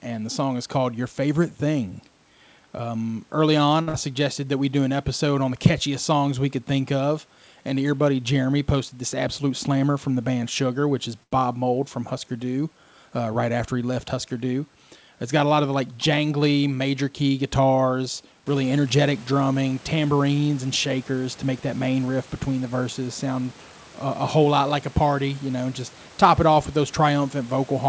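At 3.82 s a sound is held too long for about 49 ms, with a slight buzz or dip. This is a short stall from a late packet: the jitter buffer ran empty, so the receiver stretched the last sound until the packet arrived, adding 49 ms of delay without losing anything.

Right after "early on", from 3.89 to 3.96 s, the last sound is held and fades for about 48 ms, and then the audio jumps ahead with about 60 ms missing. This is a burst of packet loss. The receiver continued and faded the last sound over the gap, then resumed further on.

From 8.92 to 9.77 s, just before "from the band", the audio runs hurried at the same pitch, about 107% speed. This is a jitter buffer speed-up. After a build-up of queued audio, the receiver trimmed short pitch-period pieces, about 70 ms in all, to cut the delay.

After "which is", at 11.23 to 11.33 s, another short stall from a late packet holds a sound for about 85 ms, with a faint buzz or dip, and adds that much delay.

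From 18.25 to 18.87 s a second jitter buffer speed-up makes the audio sound rushed, at about 111% speed, again removing about 70 ms.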